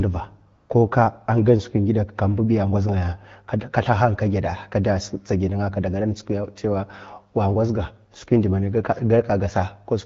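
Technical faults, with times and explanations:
0.57 to 0.69 s, AMR comfort noise: For about 120 ms the phone judged the talker silent and sent no speech frames. The receiver filled that gap with synthetic noise built from a rough estimate of the background's level and spectral shape. The real room sound drops out and a smooth, steady hiss switches in, then switches off again. The surrounding wideband speech stays clear, which fits an AMR-WB link at around 12.65 kbit/s.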